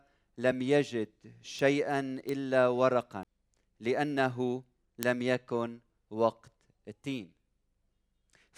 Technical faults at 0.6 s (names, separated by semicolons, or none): none